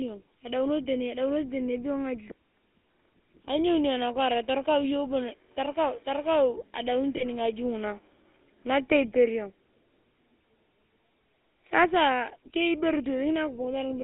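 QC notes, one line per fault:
throughout: GSM full-rate codec. Plainly audible buzzy, gravelly roughness over the speech, with a dull, narrow tone limited to about 250 Hz to 3.5 kHz. The vocal tract is modelled and excited by sparse, regularly spaced pulses, which fits 13 kbps full-rate coding.
7.16–7.24 s: lost GSM frames. A brief rough, metallic ring holds the sound. The decoder concealed the gap by reusing the last good frame's settings, which fits a single lost 20 ms frame.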